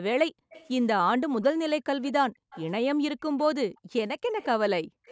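From 0.31 to 0.5 s the background is gated by the echo canceller. The room sound drops by about 40 dB while the loudspeaker plays, then recovers. From 0.5 to 0.69 s a faint copy of the speech trails 205 ms behind at about 25 dB below it. This is likely an echo leak, where the canceller failed to remove what the microphone picked up from the loudspeaker. The same delayed copy returns from 2.02 s to the end, louder at about 20 dB down. Over 2.3 to 5.06 s the canceller again gates the background, cutting it by up to about 40 dB for roughly a second in total.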